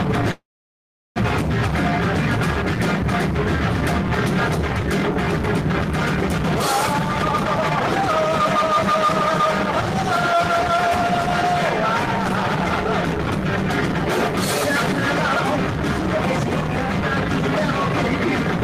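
Packets were likely held up in transit at 0.31 s, letting the jitter buffer run dry. This call audio freeze lasts until 1.18 s. The receiver stretches the last sound into a brief fading buzz, then about 730 ms of silence fills the wait. When the audio resumes it picks up exactly where it stopped, so nothing is lost, but the 844 ms pause pushes everything after it later by the same amount.

From 6.87 to 9.42 s the jitter buffer holds more audio than it wants, and the receiver drains the excess by cutting out tiny slices, one or a few pitch periods at a time, over and over. This jitter buffer speed-up runs the sound at about 127% of normal speed with its pitch unchanged, removing roughly 0.7 s in total, so the passage comes across as rushed and hurried.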